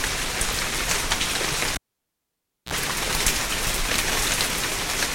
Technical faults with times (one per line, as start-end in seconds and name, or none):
1.74-2.73 cable pulled and plugged in